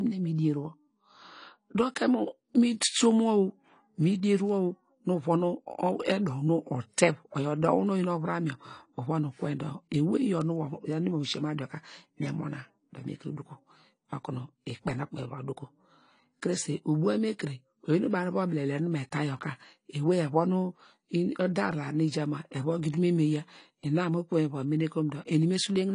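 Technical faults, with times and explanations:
Throughout, AAC compression: the speech is dull and smeared, with a warbling, fizzy texture on sibilants, which fits a low AAC-LC bitrate near 32 kbps. The encoder likely lowered its cut-off and left spectral holes, so the top is patchy and fizzy rather than cleanly rolled off.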